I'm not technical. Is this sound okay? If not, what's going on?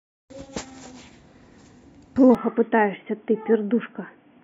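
No. An input switched to a poorer device from about 2.35 seconds to the end. The speech suddenly turns dull and boxy, as if heard through a phone, with nothing above about 3.4 kHz, and a faint new background noise appears. The loudness stays the same and there's no gap at the change. The likely cause is the recording quietly switching to a different microphone, such as a headset in call mode.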